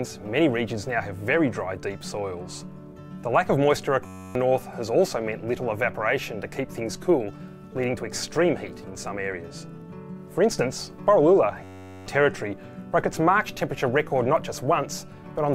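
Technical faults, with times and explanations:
4.06–4.35 s and 11.64–12.06 s, system hang loop: one 10.67 ms slice, which fits a 512-sample buffer, repeats exactly 27 then 40 times, making a steady 93.8 Hz buzz rather than a stutter.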